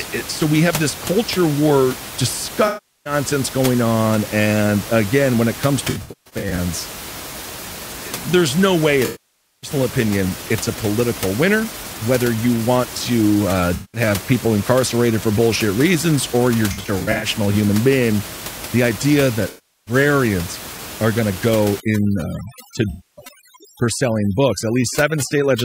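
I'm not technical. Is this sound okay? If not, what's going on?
No. At seven points, pieces of the compressed audio stream went missing, an AAC frame loss with concealment, and the player patched each gap by guessing from the last sound it had. You hear brief smeared, noisy or hollow patches, each lasting from about a fifth to over half a second, at 2.67, 5.89 (right after "again when it comes"), 9.05, 13.74, 16.71 (between "bullshit reasons or you're" and "human being the idea"), 19.48 and 22.90 s.

From 21.8 s to the end, starting after "are going to go", overdone noise removal was applied. A cleanup tool set too strong deletes anything resembling background hiss, so the room's background drops and breaks up into twinkling specks.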